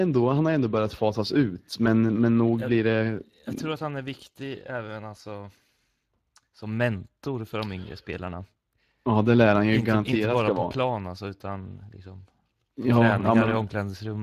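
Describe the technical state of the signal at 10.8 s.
At 10.8 s the speech carries Speex codec damage, as it does through the whole clip. Speex models speech with a CELP predictor and a coded excitation. Here the excitation gets too few bits, so the voice sounds noisy and hoarse. The upper band is not real detail. It is a shaped, noise-like fill with nothing above 15.3 kHz. The plainly audible coarseness fits a middle-low setting around 22 kbps.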